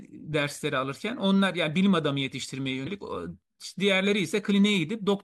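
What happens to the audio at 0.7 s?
Nothing goes wrong at 0.7 s; the speech carries on intact through that moment, with no dropout, click or distortion to be heard.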